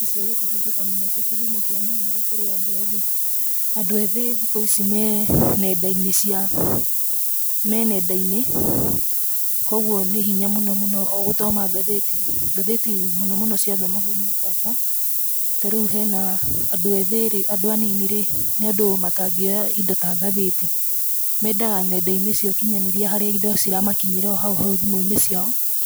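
Speech, with low bit depth and noise shaping throughout: at about 4 bits the rounding error is pushed upward into a thin, bright hiss roughly as loud as the voice.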